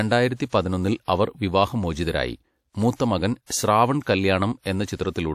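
Speech with pre-echo: a short hiss leads into sharp attacks at 1.03–1.08 s (just before "അവർ വിവാഹമോചിതരായി"), 2.96–3.00 s and 3.46–3.50 s, spreading 41–54 ms ahead. Block-wide codec quantisation noise causes it; unlike reverb, the smear comes before the onset, not after.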